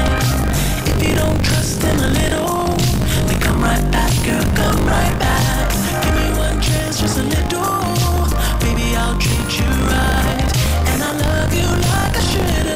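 From start to finish the audio carries buffer tearing. The writing program and the playback hardware have drifted out of step, so in each period roughly a sixth of the buffer still holds audio from one lap earlier, around 40 ms stale, with a hard splice at each edge. The result is a constant robotic rattle at 50 Hz, which fits a 20 ms buffer period. Unlike mains hum at the same pitch, the buzz vanishes whenever the signal falls silent.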